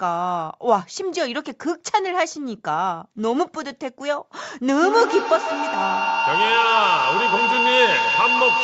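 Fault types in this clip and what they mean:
Feedback howl: from 4.82 s to the end, a shrill tone near 3 kHz swells out of the speech, pulsing roughly every 150 ms and peaking at about 1 dB above the speech level. Two devices in one room share the call, so the loudspeaker's output re-enters the microphone and comes back louder on each trip. The repeats narrow onto the frequency this loop favours and keep building, because neither device is muted before the clip ends.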